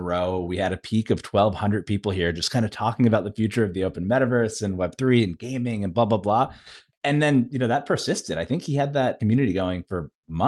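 Speech recording; no technical faults detected anywhere in the clip.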